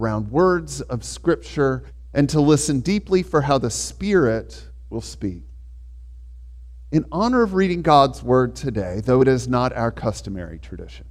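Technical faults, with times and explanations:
No technical faults can be heard anywhere here.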